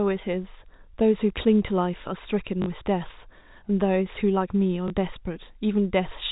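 At 2.62 to 2.66 s and 4.88 to 4.90 s, packet loss with last packet repeated produces a short robotic stutter and then a small blip rather than silent gaps, which fits 20 ms packets being replayed.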